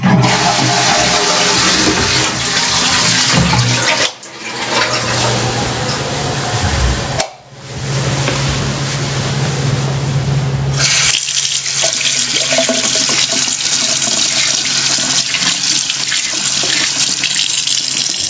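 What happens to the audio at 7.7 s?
At 7.7 s the level breathes up and down by around 30 dB while loud and soft parts sit squashed close together. This gain pumping runs through the whole clip, not just this moment. The likely cause is input gain set far too high, with a fast limiter or compressor clamping down on every loud sound.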